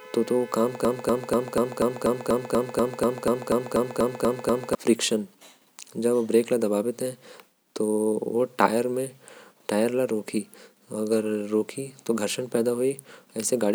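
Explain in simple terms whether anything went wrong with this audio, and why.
From 0.85 to 4.75 s, the speech gets stuck in a broken-record loop. One short piece, about a quarter of a second long, repeats 16 times without a break. The likely cause is a stalled player or stream replaying its last fragment. Whatever was said during that time is lost.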